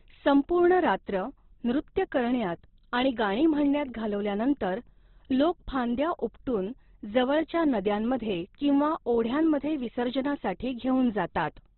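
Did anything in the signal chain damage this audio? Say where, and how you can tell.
Yes. The speech sounds grainy and rough throughout, cut off above 4.1 kHz. That points to the codec stage: likely Opus compression, noise-filling narrowband audio at a bitrate around 12 kbps.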